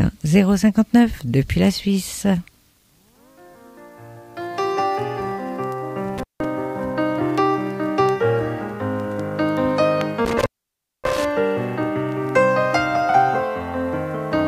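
At 6.18 s the sound drops out abruptly, with a short crackle at the break and again where it returns at 6.45 s; the silent stretch lasts about 170 ms and holds faint hiss. A longer dropout follows from 10.25 s to 11.25 s, with the line open for about 580 ms. Both gaps are intermittent contact: a loose cable or plug briefly losing its connection, so the signal disappears and the scratchy edges mark the contact breaking and remaking.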